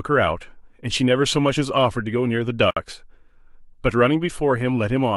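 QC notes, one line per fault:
2.71–2.77 s, gap at a join of encoded pieces: the speech drops into a 59 ms gap with smeared edges, then resumes where it left off. Two separately encoded pieces were joined untrimmed, leaving encoder start delay and final-frame padding in place.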